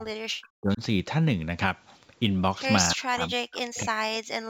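Sample clock jitter runs throughout: the converter's clock wanders by a few microseconds, adding roughness about 30 dB below the speech that grows on loud, bright sounds. From 0 to 0.81 s and again from 2.95 to 4.49 s, the speech dips by up to around 40 dB, likely speech suppressed in double talk as the echo canceller ducked the talker.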